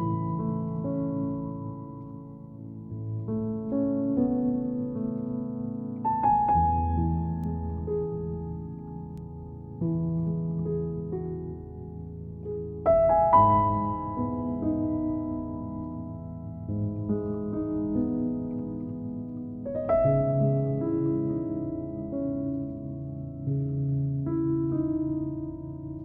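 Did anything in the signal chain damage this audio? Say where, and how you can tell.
Yes: bit error spikes from a digital link or storage, single ticks at 7.44 s and 9.18 s, about -29 and -35 dBFS. They are one or two samples wide and unrelated to the signal, unlike clicks from dropouts.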